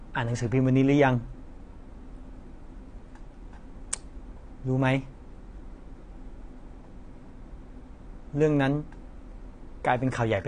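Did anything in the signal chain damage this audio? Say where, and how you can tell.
Yes, at the codec stage. The speech is dull throughout, with fizzy, warbling sibilants, which points to AAC compression, likely AAC-LC at around 32 kbps. A spectrogram shows a hard ceiling at 10.1 kHz, where the coder discarded everything above to save bits.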